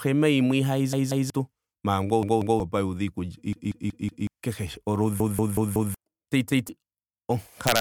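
New audio repeatedly failed to arrive in time, so the playback device replayed its last buffer, a repeated buffer fault. Each repeat lasts about 186 ms, which fits an 8192-sample buffer. The speech stutters with hard joins at 0.93 to 1.30 s, 2.23 to 2.60 s, 3.53 to 4.27 s, 5.20 to 5.94 s and 6.50 to 6.69 s. From 7.67 to 7.80 s, an integer overflow pushes peaks about 2 dB past the limit, where they wrap to the opposite sign and produce cracks sharper than clipping.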